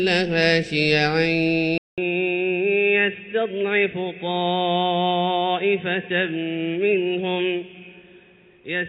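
At 1.78 s the sound drops out for about 200 ms. When it returns, it is dull and boxy, with nothing above 3.8 kHz. It is also about 5 dB quieter, and a faint new background noise sits roughly 45 dB below it. This character holds to the end. The cause is likely an input switched to a poorer device mid-recording. That device has a narrower band, a different level and its own noise floor.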